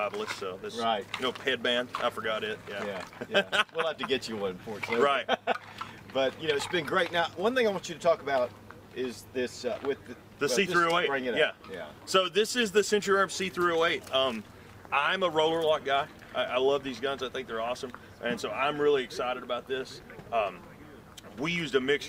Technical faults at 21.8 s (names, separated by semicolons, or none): none